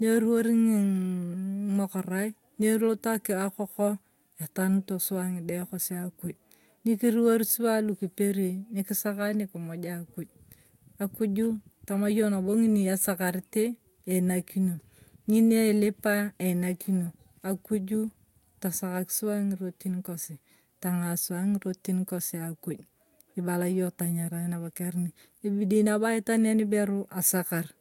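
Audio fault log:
No faults detected in the speech recording.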